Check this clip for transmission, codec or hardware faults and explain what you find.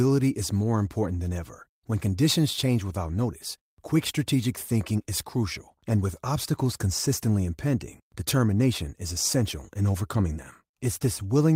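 Nothing turned up in this speech recording that points to a transmission, codec or hardware problem, so there's nothing here to flag.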